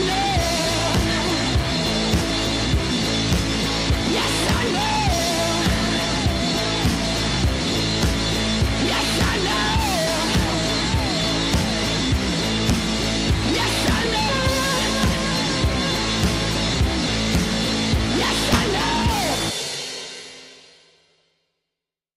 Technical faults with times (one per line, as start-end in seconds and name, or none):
17.07 compressed frames skipped
18.53-18.56 compressed frames skipped